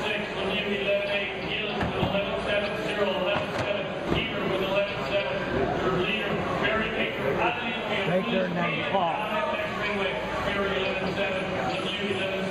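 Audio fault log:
No fault can be heard anywhere in this audio. Nothing in the sound points to a problem in how it was captured, processed or delivered.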